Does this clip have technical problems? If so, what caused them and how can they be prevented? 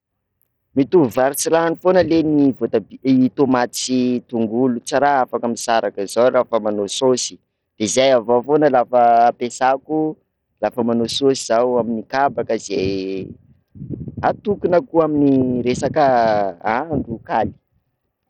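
Yes: throughout the speech, the treble flickers and drops out under a gritty haze, likely Bluetooth SBC compression at a starved bit pool, fitting roughly 64 kbps. Unlike a plain low-pass, the top comes and goes. Use a higher SBC bitpool, AAC, or a wired connection.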